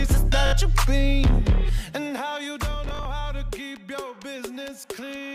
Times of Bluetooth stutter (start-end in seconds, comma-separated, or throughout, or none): 0.46-0.53, 2.89-3.05